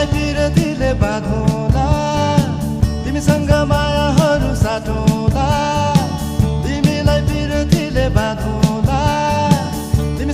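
No technical faults can be heard anywhere in this recording.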